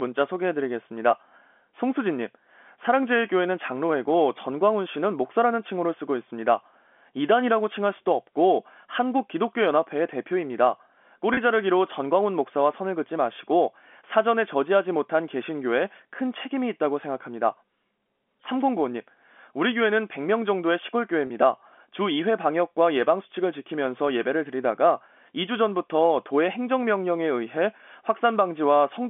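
At 11.34 s and again at 21.27 s there's packet loss with pitch repetition. Each time 30 ms of speech dropped out, which fits one lost packet, and the receiver bridged it by repeating the last pitch period. You hear a brief held, slightly buzzy note within the narrow G.711 telephone band.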